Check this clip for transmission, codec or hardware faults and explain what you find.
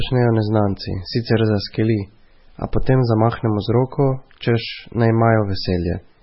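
One fault runs through the whole recording: MP3 compression. Throughout, the speech sounds watery and swirly, with nothing above 5.6 kHz. That is likely heavy MP3 encoding, around 16 kbps, that cut the treble and zeroed weak frequency lines.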